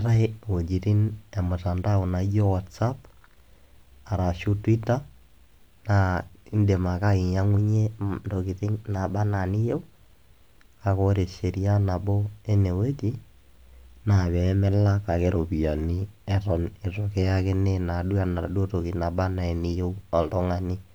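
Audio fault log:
7.58–9.96 s and 15.36–15.99 s, drift correction step: just after "indim ake" the audio jumps to about 6% faster and roughly a semitone sharp (102 cents), holds, then snaps back. At 15.36 s the opposite step gives about 6% slower and about 108 cents flat for 0.63 s. The likely cause is clock-matching software abruptly changing playback rate to rebalance its buffer. Unlike wow or flutter, the shift is a flat plateau with sharp edges. Unlike a pitch shifter, timing changes along with pitch.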